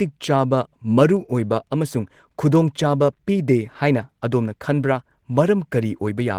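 Speech with Opus voice compression throughout: hoarse, slightly robotic coarseness fitting about 16 kbps, yet content still reaches 20.2 kHz, unlike a band-narrowed low-rate codec.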